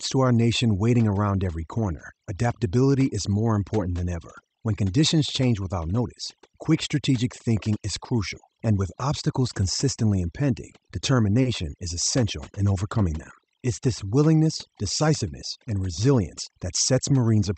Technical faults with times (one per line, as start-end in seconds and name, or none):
0.00-17.58 overdone noise removal
11.41-11.47 short stall from a late packet